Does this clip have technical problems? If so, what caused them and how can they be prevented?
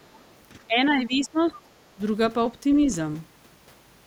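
Yes. The echo canceller likely left some of the loudspeaker signal in the microphone, so the other side's voice leaks through faintly, roughly 35 dB below the speech, from 0.03 to 0.31 s. Using headphones, or an echo canceller tuned to remove deeper residual echo, would prevent it.

During double talk the echo canceller likely could not separate the talker from the loudspeaker echo and turned both down. This is speech suppressed in double talk: the voice drops by around 15 dB from 0.67 to 1.57 s and again from 1.95 to 2.01 s. Headphones, or an echo canceller with reliable double-talk detection, would prevent this.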